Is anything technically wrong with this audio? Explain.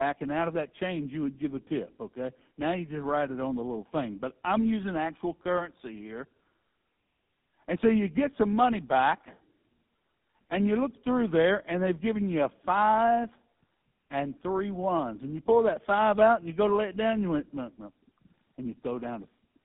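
Yes. Throughout, the speech shows tandem speech coding: two low-rate speech codecs in series, consistent with AMR-NB followed by GSM full rate. Each coder re-encodes the previous one's errors, so the speech is rough, muffled and warbly, with nothing above 3.8 kHz.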